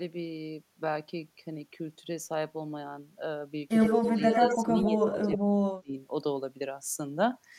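At 3.8 s a second copy of the speech appears, trailing the original by 92 ms. It is only a little quieter than the speech and lasts until 4.58 s. This is an echo leak. The likely cause is a far end on loudspeaker whose echo canceller let part of its microphone pickup return down the line.

From 3.89 s to 5.97 s the main speech keeps sinking and cutting out in pieces. The deepest dips are very large, around 40 dB, and the affected stretches add up to about one and a half seconds. This is speech suppressed in double talk. With both sides sounding at once, the canceller likely turned everything down, so the speech drops away in gaps.

Between 4.8 s and 5.38 s the echo leak returns, again 92 ms behind. This time it is about as loud as the speech itself, so the two copies compete for attention.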